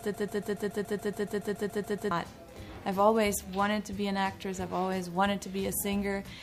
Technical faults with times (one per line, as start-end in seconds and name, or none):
0.00-2.11 broken-record loop